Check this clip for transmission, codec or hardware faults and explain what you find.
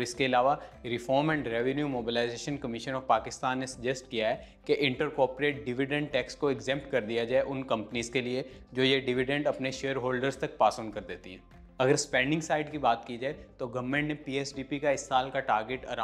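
No transmission, codec or hardware faults can be heard anywhere in the clip. Nothing in the audio calls for further explanation.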